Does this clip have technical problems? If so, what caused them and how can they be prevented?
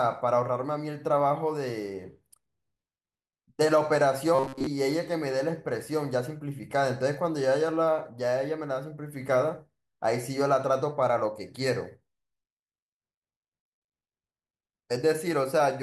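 Yes. From 4.35 to 4.67 s the speech turns into a rigid metallic buzz at 133 Hz: robotic sound from repeated short buffers, likely from starved playback looping a segment of about 7.5 ms over most of that stretch. Unlike dropouts, nothing falls silent. Enlarging the jitter buffer prevents it.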